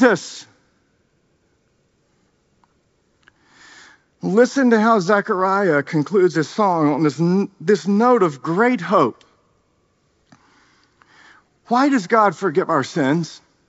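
At 9.15 s, just after "this note of great", bit errors on an ADPCM link give a brief pop. Flipped bits upset the G.722 decoder's step size and predictor, so the error rings on for some milliseconds. It shows as a short broadband streak on a spectrogram and a jagged spike in the waveform.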